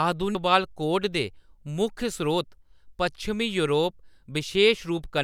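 At 0.35 s there is damaged data in the compressed stream: a brief glitch cuts into the speech. Corrupted bytes at that point made the decoder misread the frame, lose sync and hunt for the next valid frame header before playback resumed.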